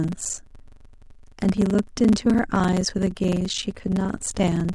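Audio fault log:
throughout: block size mismatch (padded). Each block is topped up with zeros, cutting a brief silence into it, so a steady 23.4 Hz buzz rides on the speech, consistent with a 1024-sample read block. Speech runs at 0.861× speed at near-normal pitch, unlike slowed playback, which drops pitch.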